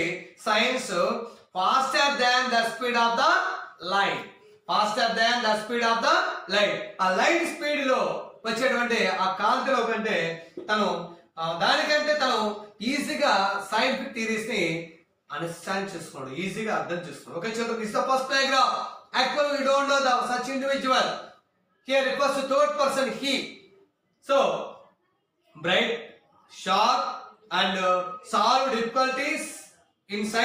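No technical faults are audible.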